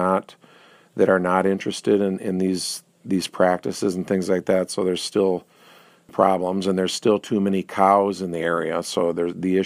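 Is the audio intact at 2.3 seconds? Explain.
Yes, at 2.3 seconds the audio is intact, with no fault audible at that moment.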